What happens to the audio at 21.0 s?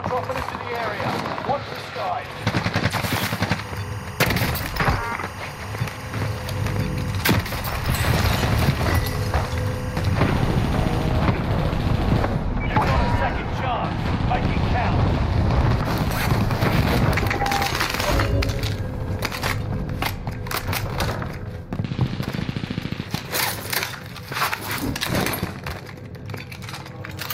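Nothing goes wrong at 21.0 s; the audio plays through that moment intact, with no audible fault.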